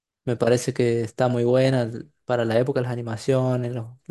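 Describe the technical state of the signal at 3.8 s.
At 3.8 s the signal is intact, with no dropout, distortion, glitch or other technical fault in the speech at that moment.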